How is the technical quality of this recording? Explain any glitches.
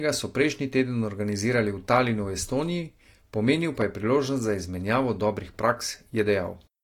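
The recording has one clear fault, a loud pop. It occurs from 3.81 to 3.84 s, just before "je priložnost za izmenjavo". It is a single sharp pop, standing around 10 dB above the speech. The speech continues underneath without a break. A sudden voltage step or pulse was most likely added to the signal, perhaps from a plug, switch, static discharge or driver glitch. The following circuitry shaped that pulse into this brief, hard transient.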